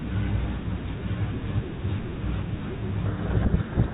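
From 3.06 s to the end, a codec payload misread buries the speech in harsh distortion. The G.726 code words are decoded with their bit order reversed. Unlike low-bitrate ADPCM rasp, it starts abruptly over the otherwise light 32 kbit/s G.726 sound.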